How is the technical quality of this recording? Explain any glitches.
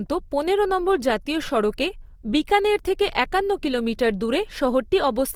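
The recording carries plainly audible compression damage from start to finish. The speech sounds grainy and rough rather than clean. This is likely Opus compression in its music mode, and the wear fits a low bitrate around 24 kbps. The encoder keeps each band's overall energy. When bits run short, it fills bands by folding lower ones or with noise. Tonal parts of the voice therefore turn noisy and granular. The full bandwidth remains.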